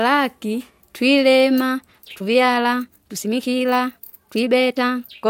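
Speech that turns abruptly rushed from 1.68 s to the end, with the pitch unchanged: a time-stretched section, likely squeezed to about 1.55 times normal speed by dropping short pieces.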